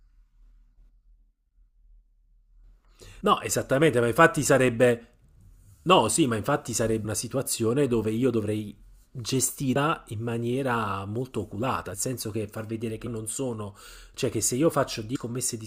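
Compressed frames skipped at 3.20, 7.04, 9.75, 11.92, 13.06 and 15.15 s: whole frames never reached the decoder output, so this speech jumps ahead, losing roughly 100 to 300 ms each time.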